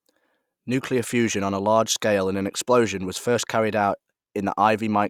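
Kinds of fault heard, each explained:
Nothing wrong jumps out here, just a speech recording sitting there doing its job without any glitches to pick at.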